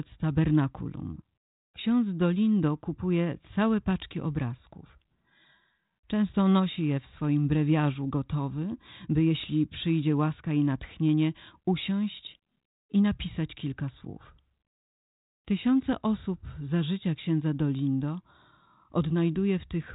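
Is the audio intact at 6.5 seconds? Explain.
Yes, the audio is intact at 6.5 seconds, with only the narrowband, lightly coloured character of the 32 kbit/s G.726 ADPCM telephone coding.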